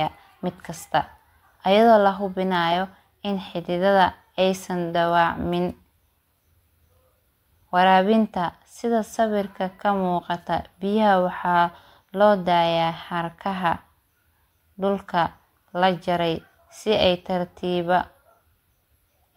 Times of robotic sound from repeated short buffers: none

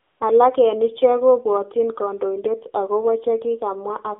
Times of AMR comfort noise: 0.00-0.20

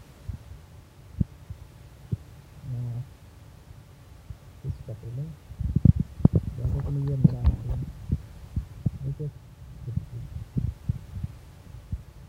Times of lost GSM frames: none

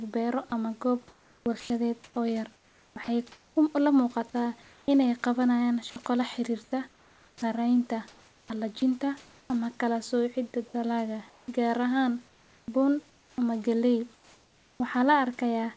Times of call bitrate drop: none

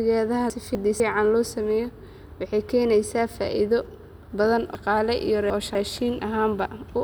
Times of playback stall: none

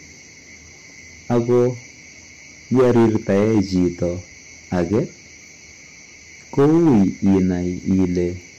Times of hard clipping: 1.31-1.68, 2.73-4.03, 4.73-4.99, 6.58-7.54, 7.91-8.05

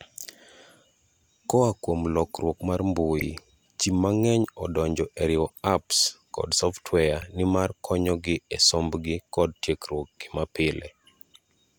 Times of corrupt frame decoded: 3.20-3.22, 5.47-5.57

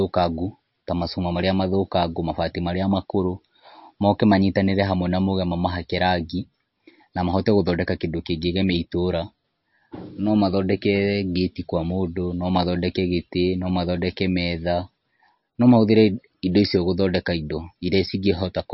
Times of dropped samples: none

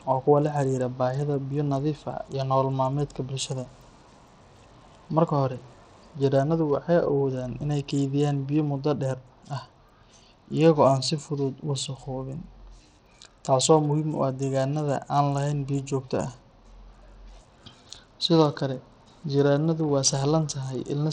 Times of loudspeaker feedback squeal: none

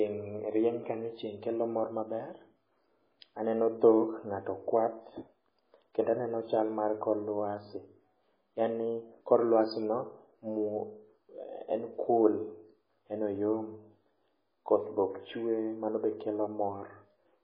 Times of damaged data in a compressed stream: none

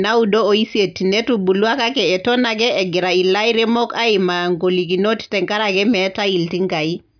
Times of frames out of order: none

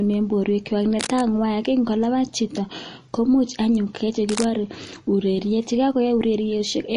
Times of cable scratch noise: 0.99-1.35, 4.28-4.45

